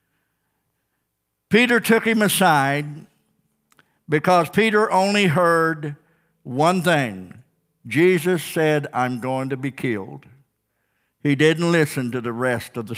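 No technical faults can be heard anywhere in the recording.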